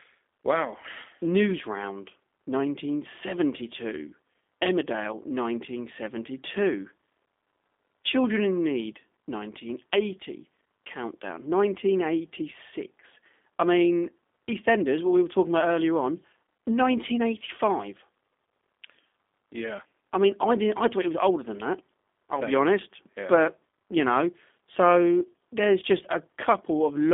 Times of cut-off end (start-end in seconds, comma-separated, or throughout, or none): none